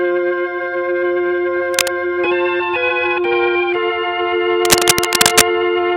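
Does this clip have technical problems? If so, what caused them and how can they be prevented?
Yes. The likely cause is a worn cable, connector or control being moved, so its contact resistance jumps around rapidly and injects dense, irregular bursts into the signal. This cable scratch noise appears as a brief scratching rustle from 1.74 to 1.91 s, roughly as loud as the sound itself, and again from 4.65 to 5.42 s, where it is longer and somewhat louder than the sound. Replacing worn leads and securing connectors so they cannot shift during recording prevents it.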